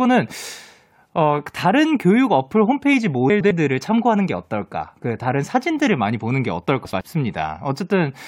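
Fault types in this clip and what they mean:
frames out of order: Two neighbouring runs of coded frames reached the decoder swapped and were decoded in that order, so each affected stretch of speech plays with its halves exchanged. From 3.30 to 3.51 s the swapped blocks are about 105 ms each, which fits runs of four frames. From 6.85 to 7.01 s they are about 78 ms, which fits runs of three. Both spots sound like a brief garbled flutter, and no time is lost.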